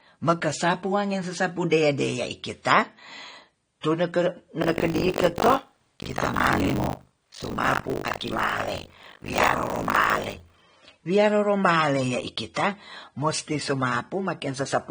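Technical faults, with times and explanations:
throughout, transcoding between lossy codecs: The speech sounds dull and smeared and carries a mix of artefacts that don't come from a single encoder. The likely cause is a chain of lossy encodes, an MP3 stage followed by a low-rate AAC-LC stage. The second encoder spends its scarce bits reproducing the first one's damage while adding its own, and the lowest bandwidth limit in the chain remains.
4.62 to 10.63 s, buffer tearing: A harsh, robotic rattle at 50 Hz rides on the speech for this stretch and drops away whenever the signal does. The writing side and the playback hardware have drifted so that they cross inside every period, which fits a period of 20 ms. About half of each period is replaced by audio from roughly 70 ms earlier, and the hard joins on both sides of that stale patch repeat at the period rate, producing the buzz.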